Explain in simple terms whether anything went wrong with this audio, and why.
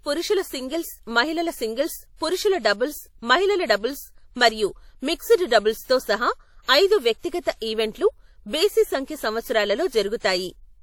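WMA compression, present from start to finish of this speech clip, is the likely cause of what went wrong. The sound has a plainly audible ringing, washy quality, with a hiss that rises and falls along with the speech. A codec like this chops the audio into fairly long chunks and saves space by storing each one roughly, so the rounding errors smear across neighbouring moments and quieter details get dropped entirely.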